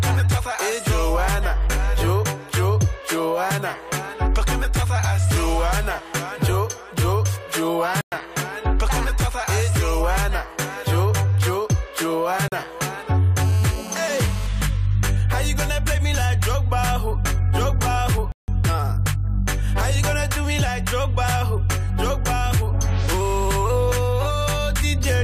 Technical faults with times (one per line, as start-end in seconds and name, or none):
8.01-8.12 block of digital silence
12.48-12.52 block of digital silence
13.42-14.47 GSM phone buzz
18.32-18.48 block of digital silence